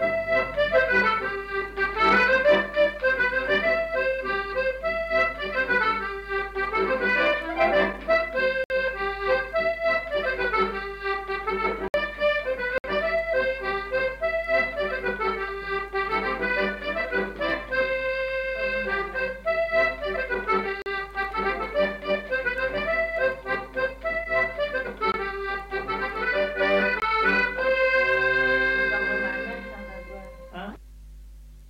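At 8.64, 11.88 and 12.78 s the audio drops out in 60 ms blocks of digital silence, followed by a 40 ms block at 20.82 s and 20 ms blocks at 25.12 and 27.0 s. Each block is a run of samples forced to zero, most likely because the output buffer was not filled in time. The longer blocks sound like short holes. A waveform shows near-flat lines, and a spectrogram shows empty vertical gaps.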